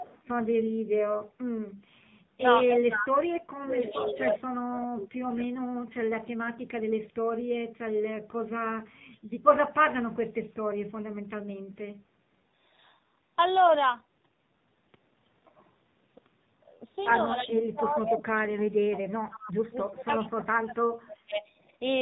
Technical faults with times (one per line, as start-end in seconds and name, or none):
0.00-22.01 AMR narrowband mobile codec
0.00-0.22 echo leak
2.38-5.45 speech suppressed in double talk
3.69-4.36 echo leak
17.39-17.62 echo leak
17.43-21.44 speech suppressed in double talk
21.34-21.38 echo leak